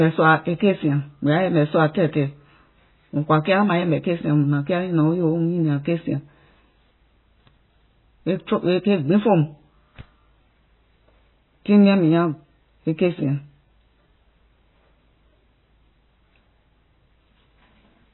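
From start to finish the speech has nothing above 4 kHz, and its quieter detail swirls and warbles as components drop in and out from one moment to the next, with s sounds turning metallic and consonant onsets smeared. This pattern is likely heavy MP3 compression at a very low bitrate, around 16 kbps. Short of bits, the encoder removed the treble at a fixed cut-off and zeroed weak frequency lines frame by frame.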